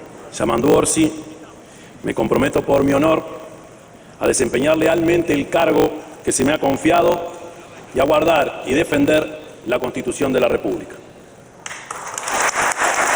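A steady 50 Hz buzz runs under the audio from start to finish, which also plays about 1.16 times too fast at roughly its normal pitch. These are the marks of a block size mismatch (truncated): one stage writes longer blocks than the next reads, which fits 1024-sample blocks each having their tail end dropped.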